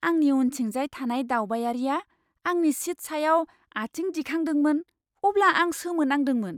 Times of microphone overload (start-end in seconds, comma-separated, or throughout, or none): none